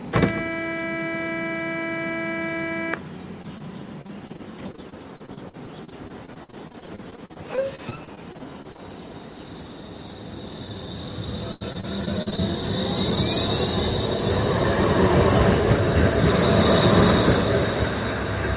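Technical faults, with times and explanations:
3.42–3.46 s and 3.58–3.62 s, short concealed packet loss: two isolated holes of about 20 ms each were patched by extending the preceding sound and then blending back. Each is a brief smear or wobble, not a sustained choppy texture, because the dropouts stay single.
4.02–8.80 s, repeated packet loss (robotic sound): dozens of holes, the longest about 51 ms, with roughly 0.9 s filled in, about a fifth of the span. The patches follow one another so closely that the sound turns choppy rather than merely smearing once.
11.52–12.40 s, repeated packet loss (robotic sound): a shorter burst of seven holes, one reaching about 81 ms, leaves about a quarter of this stretch synthesized. The fill-in stays within the call's 4 kHz G.711 bandwidth.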